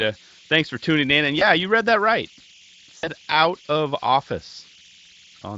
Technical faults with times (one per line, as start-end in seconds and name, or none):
0.00-5.57 converter idle tones
1.39-1.45 VoIP packet loss concealed by the speech codec
2.97-3.09 VoIP packet loss concealed by the speech codec